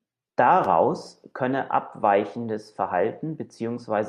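No technical faults can be heard anywhere in the recorded speech, and the signal stays continuous and stable throughout.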